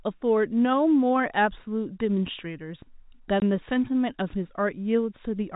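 At 3.40 to 3.42 s the speech drops into a 20 ms hole of dead silence, a case of packet loss filled with silence. The gap matches a single 20 ms packet, and it has hard edges. Unlike concealment, nothing is smeared or repeated across the gap, and the G.711 telephone band around it stays intact.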